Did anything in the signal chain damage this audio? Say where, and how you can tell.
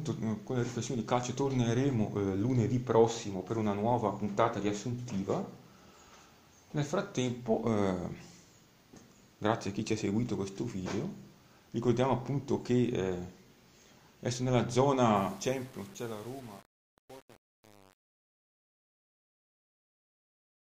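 Yes. A sample-format conversion stage left truncation distortion on the fade-out from 15.16 to 20.65 s. The tail goes gritty, which fits roughly 7 bits with no dither.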